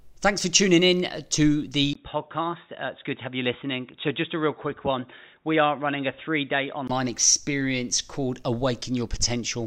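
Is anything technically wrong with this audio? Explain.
Yes. From 1.93 to 6.90 s the speech turns dull and boxy, with nothing above 3.8 kHz, about 5 dB quieter, and with new faint background noise. A 20 ms gap marks the switch, likely an input switched to a poorer device. A simple filter wouldn't change the level and noise this way.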